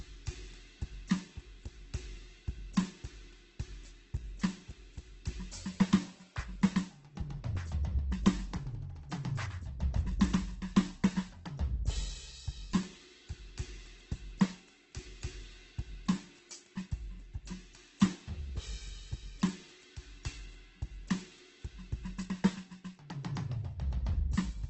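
Throughout, the music is band-limited at 8.2 kHz and sounds grainy and rough. This is likely heavy Opus compression at a starved bitrate near 12 kbps, filling bands with noise.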